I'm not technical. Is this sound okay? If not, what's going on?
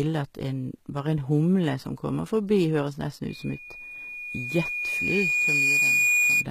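No, there are three problems.

The biggest one is a loudspeaker feedback squeal. Right after "kommer forbi høres nesten", at about 3.29 s, a single high tone around 2.4 kHz starts and keeps swelling for roughly three seconds until it's louder than the speech itself, lasting until 6.46 s. It happens when a microphone picks up the speaker it's feeding, and that one pitch keeps looping round and growing.

Throughout the whole clip there's also sample clock jitter. The timing clock in the recording gear wobbles, so each slice of sound gets captured a touch early or late. You hear that as a hiss or roughness riding along with the speech. It gets stronger on loud and bright moments and disappears in the pauses, because the error only shows up when the sound is actually changing.

Finally, the sound is processed in a way that's plainly audible, and nothing is left above about 14.9 kHz. That's most likely HE-AAC compression, a squeeze-it-small format. 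It keeps the lower part of the sound and fakes the treble by copying lower bits upward, so s sounds can come out gritty, metallic or lispy.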